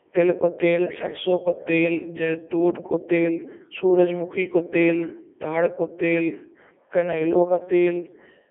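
From start to end, the speech passes through a Codec 2 vocoder. Little of the original waveform survives. The decoder rebuilds the voice from pitch, voicing, energy and a coarse spectral envelope, using sine waves. The result is robotic and buzzy, with heavy damage throughout. The sound sits in a narrow band of about 250 Hz to 3.5 kHz. Nothing remains above 3.6 kHz. The quality fits Codec 2's top 3.2 kbit/s mode.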